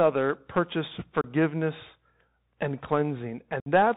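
Bluetooth CVSD headset codec, present from the start to the end of this speech clip, has plainly audible damage. The sound points to a 64 kbps CVSD link. The codec sends one bit per sample to nudge the waveform up or down with an adapting step, so nothing above 4 kHz survives. Loud, bright passages outrun the step and distort, sibilants come out scratchy, and a grainy hiss runs beneath the speech.

Unconcealed Bluetooth headset packet loss first strikes from 1.21 to 1.25 s, where about 30 ms of audio, a handful of short voice packets, never arrived between headset and phone. Nothing was filled in to cover the gap, so the speech drops out abruptly and the edges of the gap can tick. A second, longer loss of 60 ms follows from 3.60 to 3.68 s, roughly seven packets. After each hole the CVSD stream resumes quieter for a moment.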